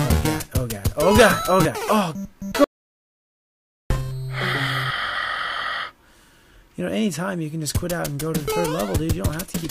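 At 2.64 s the sound stops abruptly, mid-flow, and the gap that follows is dead digital silence, with no room tone or background hiss underneath, until it snaps back at 3.90 s. That is an audio dropout to silence lasting about 1.26 s, and whatever was happening during it is simply missing. The likely cause is a brief loss of input, such as a disconnected device, a failed link or an accidental mute, while recording carried on writing silence.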